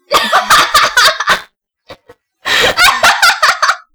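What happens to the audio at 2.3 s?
At 2.3 s you're right in the middle of buffer tearing, which runs from about 1.29 to 2.81 s. The writer and the hardware reader have slipped, so a small slice of each buffer replays audio from a lap earlier, with hard joins that give a rattly 200 Hz buzz over the sounds.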